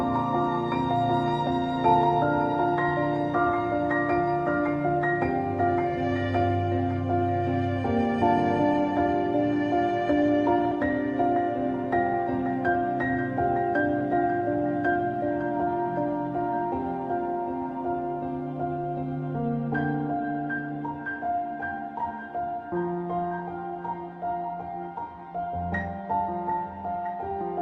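At 10.71 to 10.73 s the audio jumps abruptly forward with no gap or filler, as though roughly 0.4 s of material has vanished and the two sides are butted together. This skip ahead happens because a stretch of audio was dropped, either in transit or by an overfull jitter buffer discarding it while later packets were already queued, so playback leapt straight to the newer audio and the delay shrank by about the same amount. Shortly after, from 11.84 to 12.82 s, the sound runs slightly fast, at about 104% speed with no change in pitch. This is a jitter buffer speed-up: holding more audio than its target, the receiver trimmed small pitch-period-sized pieces many times in succession, removing roughly a twentieth of a second in total to bring the latency back down. The call path itself sounds like Opus coding at a rate consistent with about 32 kbps, with the top end rolling off around 12 kHz.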